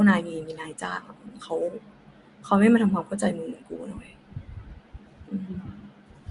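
Nellymoser compression throughout: the speech is rough, hissy and smeared underwater, with nothing above 10.6 kHz, likely from coarse fixed-bit block coding consistent with 44 kbps.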